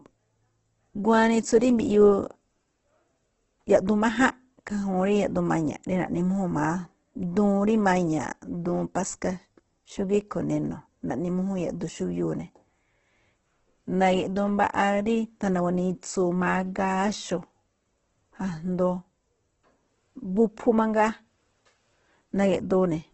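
Speech all the way through, and the whole 23 seconds carries Opus compression damage, and heavy at that. Nothing comes through above about 8.2 kHz, so the top end is gone, and what's left sounds grainy and rough, with the band energy held but the detail filled in with noise. That's likely Opus in its CELT music mode running starved, which fits a very low rate somewhere around 12 kbps.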